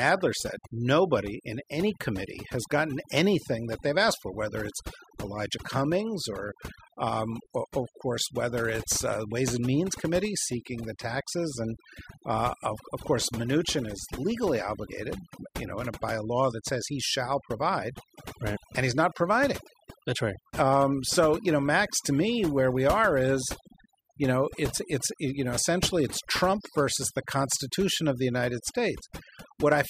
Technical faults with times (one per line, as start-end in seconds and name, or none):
0.00-29.90 overdone noise removal